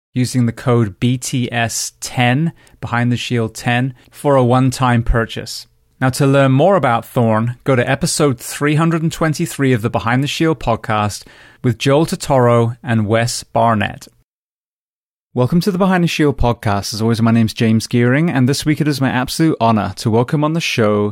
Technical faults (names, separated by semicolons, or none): none